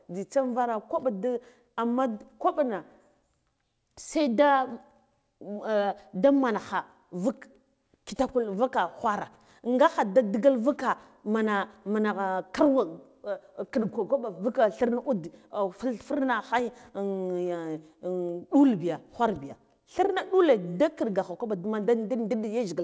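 No technical faults can be heard in this speech, which arrives over a call link whose content stops at 8 kHz, as fits a wideband codec such as G.722, with nothing beyond the ordinary character of that path.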